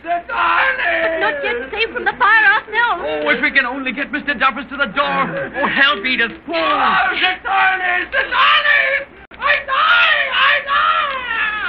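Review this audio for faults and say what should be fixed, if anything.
A gap between stream segments at 9.25–9.31 s: mismatched segment time stamps leave a 57 ms silent hole, a hard-edged flat line in the waveform and a blank vertical stripe on a spectrogram. Making each segment's time stamp begin exactly where the previous one ends would prevent it.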